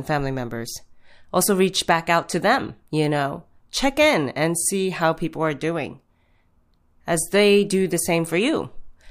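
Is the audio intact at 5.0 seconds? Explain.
Yes, the speech at 5.0 seconds is intact, with no dropout, click, distortion or other fault at that moment.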